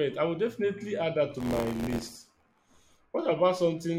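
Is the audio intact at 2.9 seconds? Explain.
No. At 2.9 seconds the audio is inside a stretch of buffer tearing running from 1.37 to 2.95 s. The writer filling the ring buffer and the hardware reading it have drifted out of step, so each period mixes fresh audio with roughly a tenth taken from a lap earlier, around 20 ms stale, with hard splices at both edges. This repeats at 86.1 Hz, which fits a 512-sample buffer, and is heard as a robotic buzz riding on the speech.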